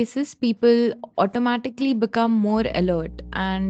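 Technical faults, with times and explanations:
0.30–0.41 s, background gated by the echo canceller: the room sound behind the speech suddenly dips by about 17 dB, falling away for roughly a tenth of a second before it swells back. That hollow gap is the echo canceller reacting to the far-end loudspeaker by clamping the microphone down hard, suppressing everything it hears, ambience included, and then releasing once it judges the loudspeaker has gone quiet.
0.94–1.11 s and 1.74–1.84 s, echo leak: a faint, ghostly second copy of the speech trails the original, lagging by 193 ms in the first stretch and 218 ms in the second, sitting roughly 25 dB and then 20 dB below the main signal. The likely cause is a loudspeaker at one end feeding back into its microphone, with the echo canceller failing to strip out all of that pickup before sending it back.
2.54 s to the end, mains hum: a steady low drone at 60 Hz enters and persists to the end of the audio, loud enough to sit only about 5 dB under the speech, with a buzzy edge from its low harmonics. 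It comes from the power line leaking into the signal chain, typically through a ground loop or a nearby transformer. The call's high-pass filtering removes deep bass but leaves this 60 Hz tone audible, and the 8 kHz ceiling of the Opus path does nothing to mask it.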